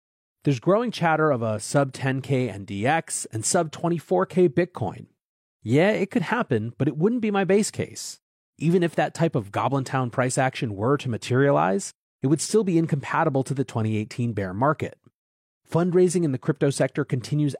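No technical faults can be heard anywhere in the recording.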